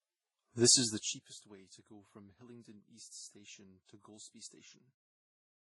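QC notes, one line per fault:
Throughout: transcoding between lossy codecs. The speech carries two layers of coding damage at once, smeared, warbly highs plus a dull, band-limited body, likely from an MP3 stage at 32 kbit/s re-encoded to Vorbis around 20.6 kbit/s. A spectrogram shows nothing above 11.3 kHz, with blotchy, fragmented detail below that ceiling.
0.82–1.37 s: zipper noise. The level drops by roughly 25 dB in many tiny, unsmoothed steps, a few hundred per second, so each jump adds a faint click and the fade sounds like a fine buzz just before "way to go from". The waveform shows a stair-stepped envelope.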